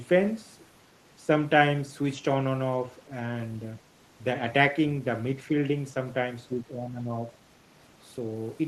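A speech recording whose level sinks by roughly 10 dB from 6.48 to 7.14 s before recovering. This is likely speech suppressed in double talk: with both ends talking at once, the echo canceller could not tell this talker from loudspeaker echo and attenuated both.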